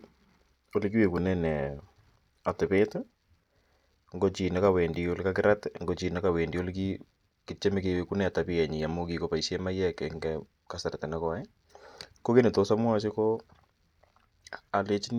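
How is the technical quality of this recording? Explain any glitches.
No technical faults or glitches audible anywhere in the recording.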